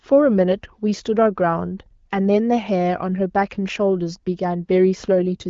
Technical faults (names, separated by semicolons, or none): none